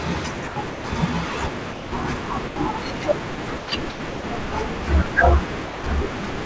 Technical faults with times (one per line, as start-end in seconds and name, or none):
0.48-0.84 sound chopped by the voice detector
1.72-1.92 sound dropped by the voice detector
2.48-2.56 sound dropped by the voice detector
3.36-4.24 sound chopped by the voice detector
5.66-5.84 sound dropped by the voice detector